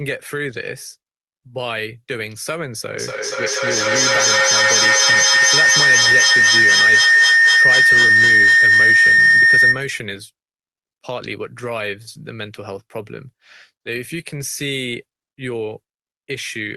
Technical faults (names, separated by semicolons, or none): feedback howl